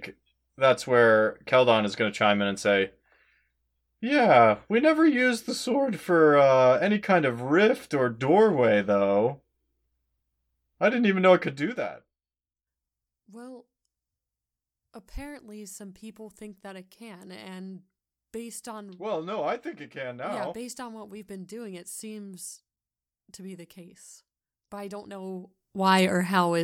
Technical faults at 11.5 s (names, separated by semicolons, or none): zipper noise